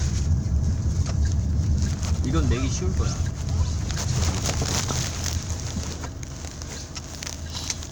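No technical faults are audible anywhere in this recording.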